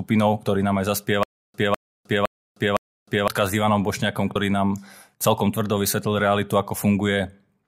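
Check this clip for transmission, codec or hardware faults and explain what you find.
Two faults stand out in this speech clip: a repeating stutter near the start and a brief skip a little later.

From 1.23 s to 3.28 s, just after "ktorí nám aj", a stutter with silent gaps breaks up the speech. The same 202 ms burst of sound plays four times, each followed by about 309 ms of dead digital silence, so it returns every 511 ms. The likely cause is a stalled player or stream that replayed its last buffered fragment at each retry and then ran dry. The audio that belonged in that stretch never plays.

At 4.34 s, just before "nám celkom tvrdo", there is a short break where the audio lurches forward by about 70 ms. This is compressed frames skipped. The jump fits roughly three lost frames of 23.2 ms each, which were either missing from the stream or rejected as damaged by the decoder.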